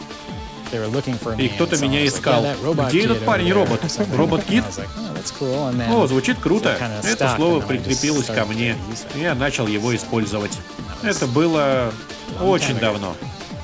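No technical faults can be heard anywhere in the clip. It has passed through a call path whose coding leaves nothing above 8 kHz, which fits a wideband call codec such as G.722.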